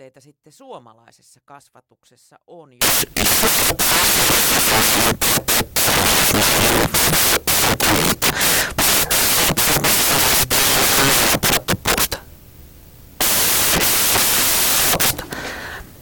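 From 2.82 s to the end, samples are built from the wrong bytes, so noisy low-order bits dominate each value, turning the speech into loud noise, close to white on the loudest sounds.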